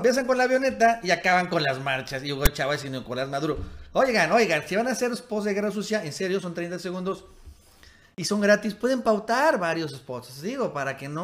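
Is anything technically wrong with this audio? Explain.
Yes. At 2.46 s a brief, loud rasp cuts in with hard edges, lopsided to one side of zero. This is file tags played as audio: a block of text metadata was decoded as sample values, and its character bytes produce that harsh, offset burst.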